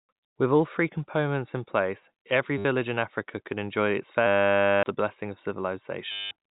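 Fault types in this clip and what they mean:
Packet loss with last packet repeated: the final received packet loops instead of falling silent, giving a robotic buzz near 100 Hz, which fits 10 ms packets, at 2.58 to 2.65 s, 6.12 to 6.31 s, and longest from 4.27 to 4.83 s.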